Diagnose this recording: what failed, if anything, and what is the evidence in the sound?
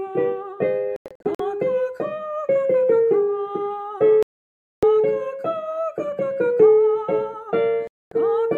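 Digital broadcast dropout at reception: sound mutes in scattered holes at 0.96–1.40 s, then drops out at 4.23–4.83 s and 7.87–8.12 s as corrupted frames get muted.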